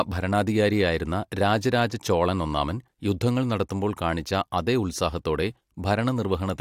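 No technical faults can be heard anywhere in this speech recording, and the signal holds steady throughout.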